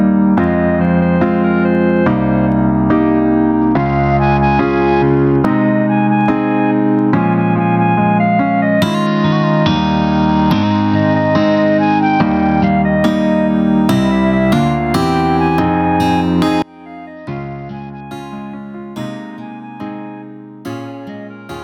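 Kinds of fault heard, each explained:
Gain pumping: The input gain is likely set far too high for the microphone, so a fast limiter or compressor has to clamp down on every loud sound. Throughout the clip the level is pulled down each time something loud arrives, a swing of around 20 dB. Loud and quiet passages sit unnaturally close in level, leaving the whole clip squashed and breathing.
Bluetooth SBC bit pool drop: A congested wireless link forced the SBC encoder to cut its bit budget to keep the stream alive. The dulling fits a fall from a bit pool of 31 to 9, roughly 72 kbps. With so few bits the upper sub-bands are starved and the rest coarsely quantised. From 3.61 to 5.36 s, 9.07 to 12.68 s and 17.16 to 18.00 s the treble goes dull and a gritty noise rises, clearing once the rate recovers.
One channel inverted: One stereo channel likely has reversed polarity from 16.62 s to the end. 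When the channels are summed to mono, everything common to both cancels. In mono, that final stretch drops by about 30 dB, and the centred content nearly vanishes. What survives is only the difference between the channels, a faint residue in place of the full sound.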